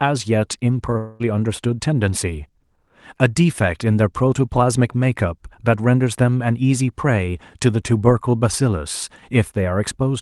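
A long network dropout runs from 0.97 to 1.22 s, likely from packets failing to arrive. About 0.22 s of speech is lost, and the receiver fills the whole gap by stretching the last sound into a fading buzz before the speech resumes, with the high end held near 12 kHz.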